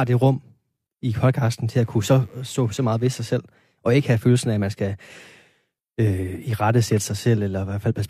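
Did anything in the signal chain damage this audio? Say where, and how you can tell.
Yes. Analogue wiring first: a steady, raspy 50 Hz mains buzz, roughly 40 dB under the speech, runs from 1.71 to 3.37 s, between "i podcasten" and "og ikke have følelsen". Switching spikes are getting in through a dimmer, a rectifier or a missing shield.

Then the codec stage: right after "af at man skal", at 5.11 to 5.16 s, there's a jump where compressed frames were skipped. About a tenth of a second jumps ahead, which fits two dropped 46.4 ms frames.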